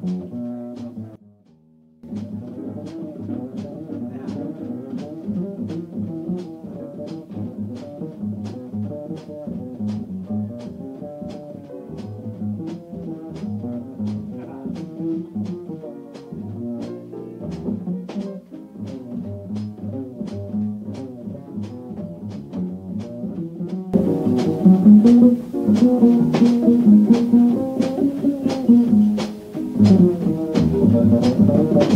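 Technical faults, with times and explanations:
1.16–2.04 s, sudden gain jump: sound and background noise drop together by about 20 dB in one step, then snap back, likely an unramped gain change rather than a fade.
23.94 s to the end, sudden gain jump: everything, including the noise floor, steps up about 15 dB instantly and stays there, unlike compressor pumping, which would ease in and recover.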